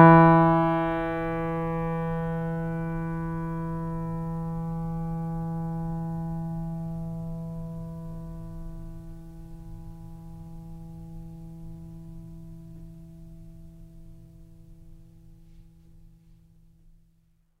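Nothing in this music stood out as a technical fault on listening.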